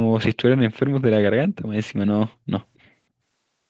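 From 2.76 to 2.9 s a very faint, delayed copy of the speech surfaces behind the main signal, trailing the original by 270 ms and sitting far below it in level, heard against audio that already stops at 8 kHz. This is an echo leak, likely from a far end playing the call on a loudspeaker, where the echo canceller failed to fully remove what its microphone picked up and sent that residue back.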